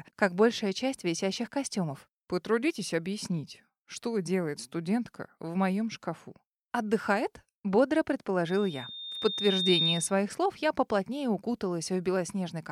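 At 8.47 s a loudspeaker feedback squeal kicks in: a single tone at 3.7 kHz that swells over roughly a second and a half until it sits a few dB above the rest of the sound, then cuts out at 10.14 s. What's happening is that the mic is hearing the speaker it feeds, and around 3.7 kHz the loop gain tipped past one, so that frequency kept feeding itself.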